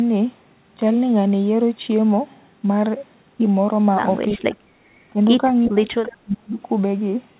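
From 4.34 to 4.61 s the speech dips by about 25 dB, then from 5.67 to 6.59 s drops deeper, about 35 dB. This is likely speech suppressed in double talk, with the echo canceller muting the talker along with the loudspeaker echo.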